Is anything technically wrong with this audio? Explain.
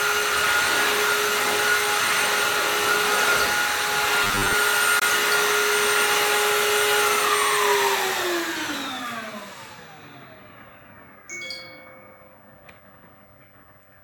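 Yes, there are two short faults.

From 4.24 to 4.54 s the sound turns into a rigid, metallic buzz at 100 Hz: robotic sound from repeated short buffers. The likely cause is audio arriving too slowly, so the player loops the last 10 ms over and over, filling most of that stretch with copies while the real material is skipped. Unlike a dropout, the sound never goes silent; it keeps roughly following the underlying audio.

From 4.99 to 5.03 s there is a hole, a Bluetooth dropout. The likely cause is a packet that failed to reach the headphones in time and was discarded, leaving about 23 ms of missing audio, which fits a single lost frame. The output simply cuts to silence and then resumes further along, as though playback had continued underneath. What separates it from the robotic fault is that nothing is repeated and no buzz appears, just a brief gap.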